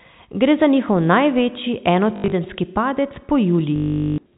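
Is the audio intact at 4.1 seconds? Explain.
No. At 4.1 seconds the sound falls inside a stretch of packet loss with last packet repeated, running from 3.76 to 4.18 s. About 420 ms of audio never arrived. The receiver filled the gap by replaying the last good packet over and over. The replays seldom line up with the pitch. The run buzzes at around 50 Hz, which fits 20 ms packets. It sounds like a brief robotic stutter.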